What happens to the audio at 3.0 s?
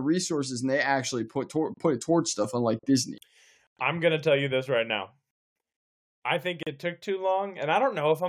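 Nothing goes wrong at 3.0 s; the speech carries on intact through that moment.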